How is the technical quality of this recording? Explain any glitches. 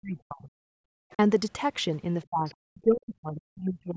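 The recording has clear echo-canceller trouble during a two-way call, with the near talker repeatedly pushed down and faint traces of the far side getting through.

Speech suppressed in double talk: from the start to 0.69 s, and again from 2.29 s to the end, the speech dips sharply, by as much as roughly 40 dB. The likely cause is both sides talking at once, so the canceller couldn't separate the talker from the loudspeaker echo and turned everything down. Unlike gating, it hits the speech itself.

Background gated by the echo canceller: between 0.98 s and 1.11 s the room sound drops by about 38 dB, then returns. Here the canceller clamped the microphone while the loudspeaker played, so only ambience vanishes briefly rather than the talker being chopped.

Other side's voice leaking through: brief scraps of a second voice appear at 1.11 to 1.16 s, very faint at around 35 dB under the speech, and at 2.46 to 2.55 s, somewhat louder at around 25 dB under. 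The likely cause is residual loudspeaker echo the canceller failed to remove. It adds sound rather than taking any away.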